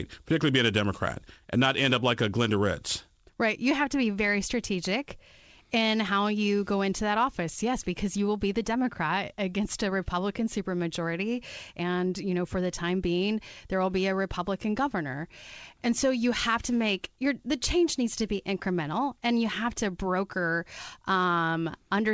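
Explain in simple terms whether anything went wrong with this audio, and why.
Nothing went wrong: this speech came through a normal internet call connection, and the absence of any sound above about 8 kHz is simply what a wideband call codec does, not a fault.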